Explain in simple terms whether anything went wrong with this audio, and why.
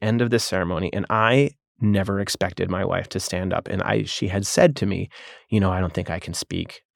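Nothing went wrong that I could hear: listening to the speech from beginning to end, nothing stood out as a problem.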